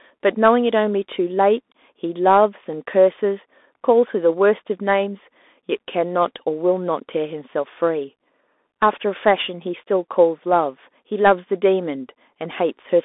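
From start to finish the speech carries the sound of a Bluetooth CVSD headset codec. CVSD sends one bit per sample, stepping up or down, and adapts its step size. Here the band runs from about 250 Hz to 3.6 kHz, and nothing passes above 3.8 kHz. The damage is plainly audible. Sharp high sounds outrun the step and distort. S sounds turn scratchy. A granular hiss sits beneath the speech, which fits a 64 kbps link.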